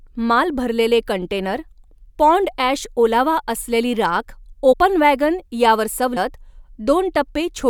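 A speech recording with two cases of compressed frames skipped. At 4.72 s and again at 6.16 s, the speech jumps forward. About 50 ms of audio goes missing at the first point and about 70 ms at the second. That fits two or three whole frames of 24 ms each being dropped. The decoder either never received them or discarded them as damaged.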